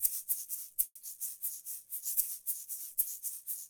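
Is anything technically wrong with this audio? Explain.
Yes. A call audio freeze runs from 0.85 to 1.03 s. The last sound stretches into a fading buzz or hiss, then drops to brief silence. Packets were likely held up in transit, emptying the jitter buffer. Playback then resumes where it stopped, about 160 ms late, with nothing lost.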